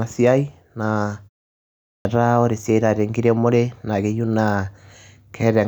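A speech recording whose output device drops into a low-power state during the 0.77 s pause and has not fully woken or relocked when sound resumes, a clipped start after a pause. The first 70 ms of the next phrase, from 1.98 to 2.05 s, never reach the output, so speech cuts in abruptly out of silence without its opening sounds.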